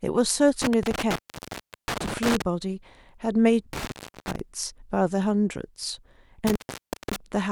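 The speech drops out with crackle at each edge, leaving only faint hiss, from 0.62 to 2.42 s, 3.73 to 4.39 s and 6.47 to 7.16 s, gaps of about 0.72, 0.43 and 0.56 s. This is intermittent contact: a loose cable or plug briefly opening the signal path.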